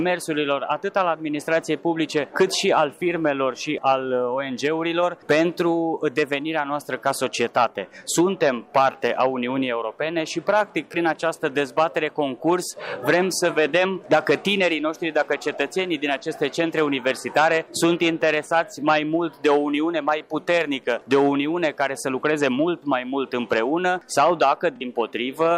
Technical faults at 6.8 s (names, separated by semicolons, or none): none